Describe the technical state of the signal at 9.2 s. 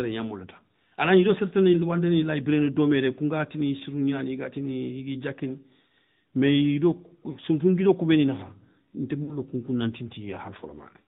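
From 9.24 to 9.36 s, just before "kounkou na", lost AMR speech frames leave a brief warble as the decoder repeats stale settings. About 40 ms is missing, which fits two 20 ms frames. The waveform dips and smears there. The AMR narrowband mobile codec, sounding like a mid-rate mode near 10 kbps, adds buzzy synthetic colouring, and the spectrogram is empty above 4 kHz.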